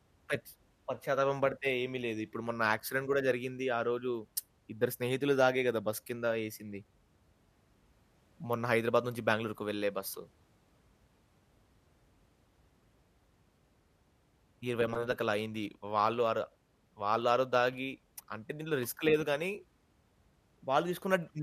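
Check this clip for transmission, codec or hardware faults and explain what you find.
One fault turns up in this speech: AAC frame loss with muting at about 2.80 s. A single frame went missing and the decoder zeroed its spectrum, so the overlapping windows fade the sound out and back in over roughly 10 ms, which fits the short frames of a low-delay AAC stream, likely AAC-ELD given the light codec colouring heard throughout. Unlike a hard dropout, the hole has soft edges.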